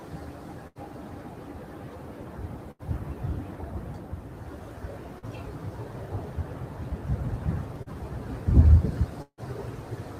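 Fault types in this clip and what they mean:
Noise suppressor applied to music or sounds: A speech-oriented suppressor runs through the whole clip and treats sustained tones, ambience and decay as noise, pulling them down by roughly 5 dB while onsets pass. The level pumps and tails thin out. On a waveform the envelope dips after each attack. On a spectrogram, held partials and reverb tails fade early and unevenly, leaving gaps between otherwise dense onsets.
Burst of packet loss: At about 0.67 to 0.78 s and 2.71 to 2.82 s, roughly 80 ms of audio fails to arrive. The receiver extends the last sound for about 78 ms, fading it as a buzz or hiss, then resumes further along with that slice gone. On a spectrogram each gap shows a smeared, repeated texture that decays, followed by an abrupt jump. The waveform shows a tapering envelope before the hard restart.
Short concealed packet loss: Near 5.19 s and 7.83 s, about 40 ms goes missing each time. 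Around 35 ms of synthesized continuation then cross-fades back into the real signal. It sounds like a brief smear or wobble, and a short transient can disappear. On a spectrogram a thin vertical band looks blurred or repeated, with no sharp onsets. The waveform shows a short stretch of overly regular cycles or shaped noise.
Long network dropout: From about 9.22 to 9.41 s, roughly 160 ms of audio is absent. The last sound is stretched for about 155 ms as a fading buzz or hiss, and the gap ends in about 60 ms of near silence before the sound returns further on. This is likely a longer break in delivery. On a waveform the envelope decays and flattens. A spectrogram shows smeared energy dimming to a dark gap, then the sound restarting abruptly.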